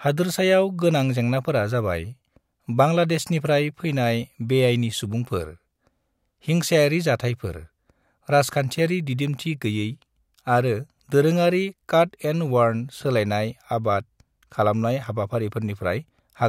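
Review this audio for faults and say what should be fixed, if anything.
No faults turn up in this audio, so nothing needs to be fixed.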